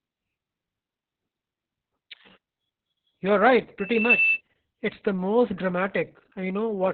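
The speech sounds muffled, hoarse and faintly robotic from start to finish, with nothing above about 4.4 kHz. This is heavy Opus voice compression: the SILK coder is confined to narrowband and codes the excitation coarsely, which fits a very low bitrate of around 6 kbps.

From 3.78 to 4.41 s a single 2.6 kHz tone swells within under half a second into a piercing squeal, rising a few decibels above the speech. This is loudspeaker feedback squeal: the microphone picks up its own loudspeaker, and the loop gain at that frequency exceeds one.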